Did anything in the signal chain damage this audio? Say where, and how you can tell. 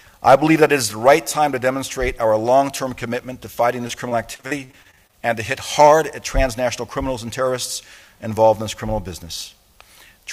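Yes, at the network stage: repeated packet loss (robotic sound) from 3.87 to 5.15 s. Twelve short dropouts, the longest 41 ms, are each patched by extending the preceding sound. That concealment covers about 23% of the span, giving a choppy texture.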